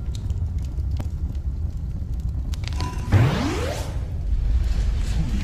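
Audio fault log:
1.01 s and 3.00 s, audio missing between chunks: at each point the sound skips ahead by a few milliseconds, and the audio on either side is butted together with no gap of silence. The two skips fall 2.0 s apart. The likely cause is a recorder or processor handling audio in 2-second chunks and dropping a brief slice each time one chunk closes and the next begins, which produces evenly spaced jumps.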